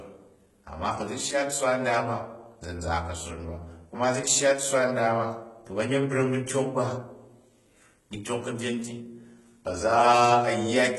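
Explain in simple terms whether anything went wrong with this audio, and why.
Something did go wrong, and it runs through the whole clip, start to finish. The sharp s sounds come out gritty and a bit lispy, with a metallic sheen, and nothing sits above roughly 11.8 kHz. That points to heavy HE-AAC compression as the likely cause. This kind of codec keeps only the lower part of the sound properly and fakes the treble by copying lower bands upward. The fake treble doesn't line up with the real harmonics, so the speech gets that brittle edge.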